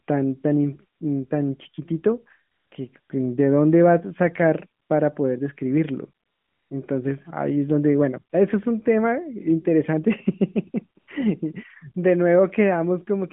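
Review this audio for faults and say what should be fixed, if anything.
AMR comfort noise appears in six pauses: 0.98–1.00 s, 2.52–2.72 s, 3.00–3.10 s, 4.82–4.90 s, 6.26–6.70 s and 11.00–11.08 s, lasting 20 to 440 ms. Each time, the phone judged the talker silent and stopped sending speech frames, so the receiver filled the gap with smooth synthetic noise built from a rough level and spectrum estimate. The real background disappears and a steady hiss switches in and out. On a spectrogram, these stretches show a flat, featureless noise band with hard vertical edges where the natural background texture is cut off. On the waveform, they appear as even, low-level blocks. The narrowband codec carrying the call, AMR at 12.2 kbps, stays within about 150 Hz to 3.5 kHz, so the comfort noise occupies that same band. To prevent the switching, disable DTX on the link, or make its voice activity detection less aggressive so that short pauses and quiet word endings are sent as real speech frames.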